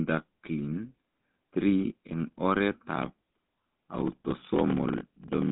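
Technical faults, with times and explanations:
Throughout: GSM full-rate codec. The line is band-limited to roughly 150 Hz–3.6 kHz with nothing above 3.8 kHz, and the speech carries a plainly audible buzzy, gravelly roughness. This comes from pulse-excited vocal-tract modelling with decimated excitation, which fits a 13 kbps full-rate coder.
2.94–5.52 s: block size mismatch (padded). Each block read, which fits a 1024-sample read, is only partly filled, and the remainder is zero-padded. The repeated gaps produce a 43.1 Hz buzz, and the speech runs at 0.861× speed while keeping its timbre.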